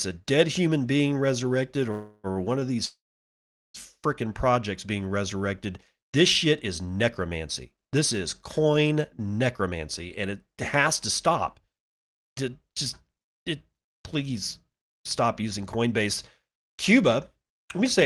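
Right after "dead human being resurrected", at 1.91 s, there's a call audio freeze that runs to 2.27 s. The last sound gets carried on as a fading buzz for about 0.32 s, most likely because packets were held up and the jitter buffer ran dry. Then the speech picks up exactly where it stopped, so nothing's lost and it just arrives later. Almost immediately, at 2.32 to 2.39 s, there's a short stall from a late packet. A sound gets held 42 ms too long with a faint buzzy dip while the receiver waits, and then it carries on with nothing missing.

The bigger call audio freeze comes at 2.85 s and lasts until 3.77 s. The held sound fades quickly, and about 0.77 s of the 0.89 s gap is plain silence before the speech resumes intact. That's likely a longer hold-up of packets on the way.

Later the receiver has to claw back some of that added delay, so you get jitter buffer speed-up. From 10.22 to 10.80 s the speech runs at about 107% speed, with roughly 50 ms trimmed out. 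From 11.33 to 17.85 s it runs at 106%, and around 0.4 s is removed in total. It's done by cutting tiny pitch-period slices many times over, so the pitch holds steady but the talker sounds a bit hurried. Underneath it all, the Opus coding haze and the top end stopping around 12 kHz point to a modest call bitrate, roughly 32 kbps.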